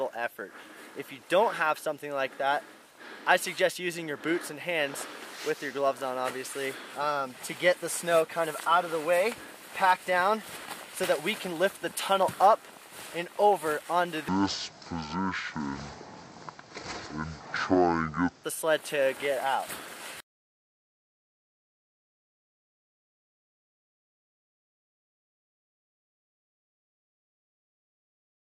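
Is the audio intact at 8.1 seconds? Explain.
Yes, at 8.1 seconds the audio is intact, with no dropout, click, glitch or other fault there.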